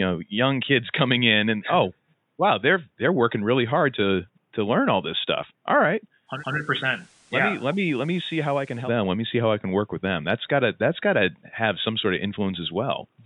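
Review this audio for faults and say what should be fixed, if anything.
From 6.26 s to 8.94 s the receiver lost its digital stream and fell back to the FM broadcast of the same station, a digital radio blending to analogue, then blended back. Each cross-fade takes about 0.18 s. During the FM stretch the speech drops by about 4 dB and broadband hiss rises to roughly 30 dB below the speech, well above the faint room noise around it. Better antenna placement or a stronger digital signal would keep the receiver from falling back to FM.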